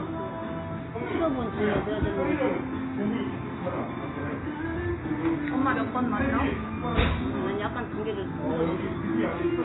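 A recording of everyday sound carries heavy AAC compression damage for its whole length. Nothing is present above about 3.9 kHz, so the audio sounds dull and boxed-in, and the remaining band has the smeared, warbling texture of a coder starving for bits. The likely cause is AAC-LC encoding at a very low bitrate, which fits roughly 16 kbps: the encoder drops the high band outright and coarsely quantises what it keeps, leaving spectral holes.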